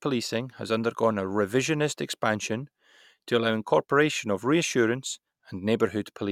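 No technical faults can be heard anywhere in the speech recording; the signal holds steady throughout without any audible disruption.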